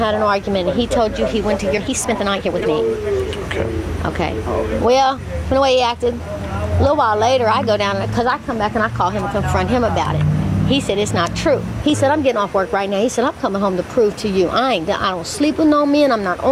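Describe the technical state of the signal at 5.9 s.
The sound runs hurried but keeps its pitch, about 8% fast from 4.89 to 6.2 s: a jitter buffer speed-up trimming repeated pitch-period slices, about a tenth of a second in total.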